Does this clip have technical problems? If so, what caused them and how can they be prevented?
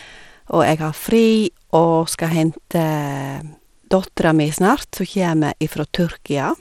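Yes. Throughout the speech, the treble sounds gritty and flickers, likely from Bluetooth SBC compression starving its upper sub-bands at what sounds like about 96 kbps. A spectrogram shows patchy high bands and nothing above 17.4 kHz. Record over a wired connection or a higher-quality codec.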